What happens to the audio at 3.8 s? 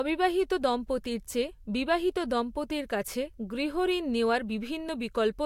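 At 3.8 s the speech carries the same layered coding artefacts heard throughout the clip, likely from transcoding between lossy codecs. The layered sound fits an MP3-style encode re-coded to Vorbis. The second codec spends bits re-encoding the first codec's artefacts, and nothing remains above 16.6 kHz.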